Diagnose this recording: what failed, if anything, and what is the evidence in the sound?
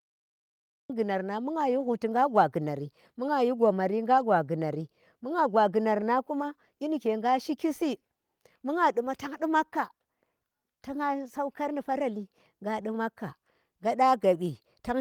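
Cut-off start, at the capture or storage stage: the first 0.90 s is dead digital silence, then speech jumps in mid-sound with no natural onset, right before "gunar nang bu gha". Recording simply began late, so the opening of that sound never got written.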